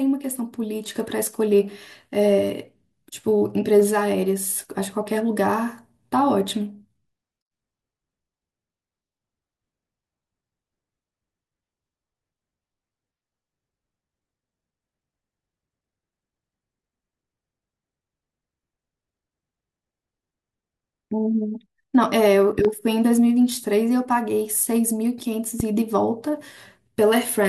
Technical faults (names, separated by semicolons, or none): loud pop